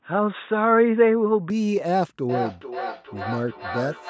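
Input switched to a poorer device, 0.0 to 1.5 s: the opening is dull and boxy, then opens up to the call path's full band up to 8 kHz. There is no gap or level jump, and any added background is faint. The likely cause is the system recording from a narrower-band microphone or headset call profile before moving to the normal input.

Feedback echo between two devices, 2.29 s to the end: the speech comes back roughly every 400 ms, thinner and ringing, with the loudest repeat about 9 dB below the direct sound. A second device in the room replays the call and this microphone picks it up again, beyond the reach of its own echo canceller.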